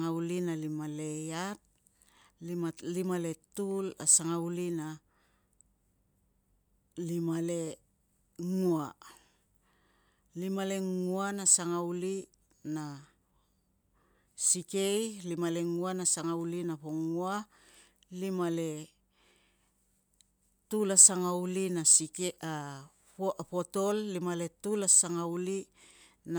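Nothing to flag here, as the speech carries on without a single technical fault worth pointing out.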